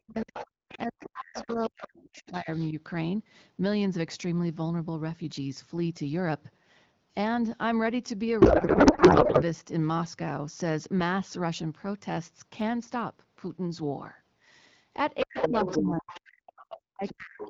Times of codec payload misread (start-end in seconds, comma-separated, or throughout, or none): 8.41-9.43